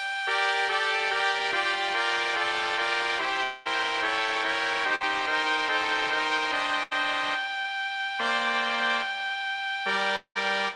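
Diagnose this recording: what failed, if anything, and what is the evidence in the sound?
Network trouble, most likely a long network dropout at 3.43–3.67 s and 10.16–10.37 s. The receiver stretched the last sound; the second one fades to silence before audio jumps ahead.

Two bursts of packet loss at the network stage, 4.95–5.02 s and 6.83–6.93 s: each is a brief held, fading continuation of the last sound, then a skip past the lost audio.

A short concealed packet loss at 7.62–7.66 s: the receiver papered over about 20 ms by extrapolating, leaving a quick smear. It sits on top of Opus coding at around 32 kbps, cut off near 12 kHz.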